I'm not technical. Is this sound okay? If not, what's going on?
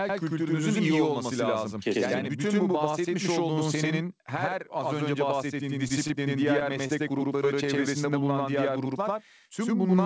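No. Channel delay (doubling) runs throughout: one side arrives about 93 ms late, which fits a 4096-sample buffer, so every syllable is heard twice like a slap echo.

Short stalls from a late packet come at 5.88–5.92 s and 6.08–6.12 s, just after "her az önce bahsettiğin". Audio arrived late, so the last sound was held briefly before continuing, with nothing lost.

Short concealed packet loss comes at 6.87–6.91 s. About 20 ms never arrived, and the gap was filled by extending the previous sound, leaving a brief smear.

The call line itself carries nothing above 8 kHz.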